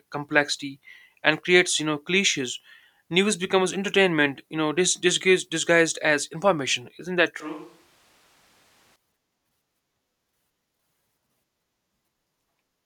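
From 7.40 s to 8.96 s the speech abruptly turns roomy and hollow, loses its low end and drops by roughly 15 dB, with room noise rising to around 25 dB below the speech. The sudden change in both directions points to a switch to a distant microphone, likely because the close microphone's signal failed or was dropped. A simple gain dip would only make the sound quieter, whereas here the reflections and background noise also change.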